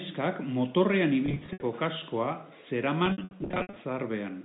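Around 1.26 to 1.62 s there's a stretch of packet loss with pitch repetition: about 200 ms of audio goes missing, scattered across 360 ms, so the receiver keeps looping the last pitch period to cover the holes. With no gap longer than about 70 ms, it comes across as a held, buzzy smear. The same thing returns from 3.06 to 3.76 s, heavier this time, with roughly 410 ms lost over 700 ms, all under the G.711 telephone coding's 4 kHz ceiling.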